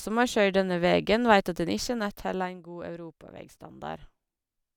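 From 1.70 to 2.59 s, a gain reduction is applied in unsmoothed 2 dB steps, about ten per second, pulling the level down by roughly 10 dB. Each abrupt step clicks, so zipper noise ticks audibly through the speech while it fades.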